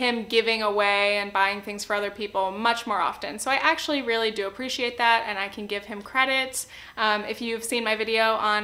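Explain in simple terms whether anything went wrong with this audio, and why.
A USB connection leaked electrical noise into the audio through its power or ground wiring, because the bus draws current in steady 1 ms bursts. That causes USB whine: a faint, steady high-pitched tone at 1 kHz, loudest at 2 kHz, running throughout.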